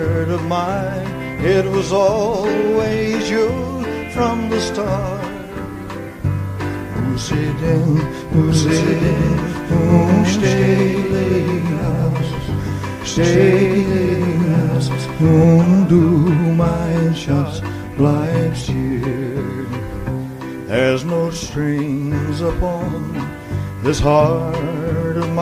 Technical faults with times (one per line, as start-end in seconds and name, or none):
8.48-15.44 doubled audio track